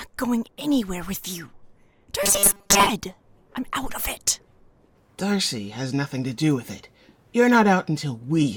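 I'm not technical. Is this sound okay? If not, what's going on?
No. From about 2.23 to 2.89 seconds the sound turns into a rigid, metallic buzz. This is robotic sound from repeated short buffers, likely caused by new audio arriving too slowly, so the player kept replaying the last tiny slice, about 5 ms long, in place of most of the real audio. That constant repetition creates the 200 Hz buzz. Unlike a stutter, you won't hear distinct chunks repeating or silent gaps, only a steady mechanical drone.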